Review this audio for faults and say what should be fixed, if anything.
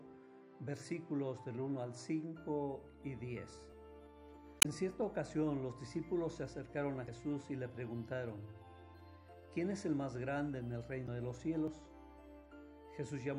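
The encoder was most likely an MP3 stage running short of bits, at a rate that fits about 64 kbps. It cuts the treble at a fixed ceiling and lets weak frequency lines flicker between frames, so the whole 13-second clip sounds plainly watery and swirly, with smeared attacks. Encode at a higher bitrate, or keep the audio lossless until final delivery.

Audio missing between chunks: the recorder likely dropped a brief piece, around 20 ms, while switching processing blocks, at a spacing that fits 4-second chunks. The two sides are butted together with no silence, giving abrupt skips at 3.72 s and 11.68 s. Buffer across block boundaries so no samples are discarded during the handover.

Damaged data in a compressed stream: corrupted bytes in the coded data made the decoder misread frames and resynchronise. This produces short glitches from 4.59 to 4.66 s, 7.04 to 7.09 s, and 11.04 to 11.09 s. 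Verify stream integrity with checksums and error-protected transport before decoding.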